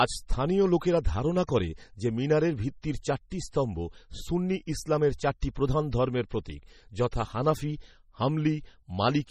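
Speech clip with heavy MP3 compression throughout, likely from a low-bitrate encode around 32 kbps: watery, swirly texture, metallic chirps on sibilants, and nothing above 17 kHz. Pre-echo appears at 7.11 s as a brief hiss of about 13 ms before an attack, because quantisation noise spreads across the transform block ahead of the transient.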